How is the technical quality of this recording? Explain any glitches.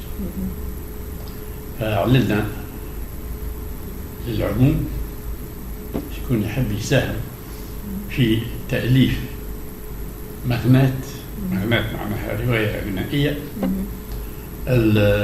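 No technical faults can be heard anywhere in the recording, and the signal holds steady throughout with nothing that counts as a glitch.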